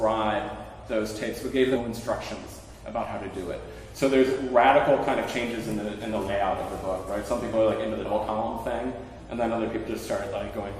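Compressed frames are skipped at 1.75 to 1.78 s, 6.27 to 6.30 s, 8.05 to 8.08 s and 10.49 s. Whole blocks, which fits 20 ms frames, never play. The sound jumps forward by roughly 150, 40, 100 and 70 ms.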